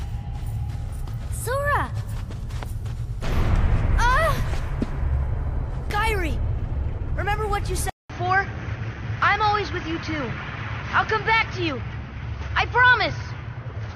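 Around 7.9 s there's a 200 ms gap, then the sound goes dull with nothing above 6.4 kHz and a faint new noise floor, likely an input switched to a poorer device.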